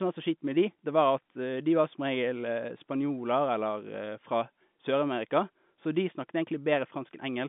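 Nothing goes wrong in this speech clip: it has the narrow, boxy sound of ordinary G.711 telephone coding, with nothing above about 3.8 kHz, and no faults turn up anywhere along the way.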